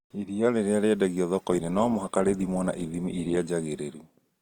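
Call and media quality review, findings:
Adaptive stream at a lower bitrate, 1.38 to 3.38 s, just after "rĩrĩa rĩendagio". Speech carries heavier codec artefacts; nothing above 20.4 kHz. The sound points to a drop from roughly 64 to 16 kbit/s. It switches abruptly with no gap, unlike packet loss.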